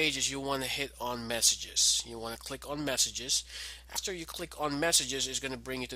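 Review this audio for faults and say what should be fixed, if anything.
At 3.95 s the sound jumps forward with a short smeared blip, losing about a tenth of a second. These are compressed frames skipped: a handful of 23.2 ms frames went unplayed, and overlapping neighbours soften the join. Verify file integrity and re-encode from an intact source.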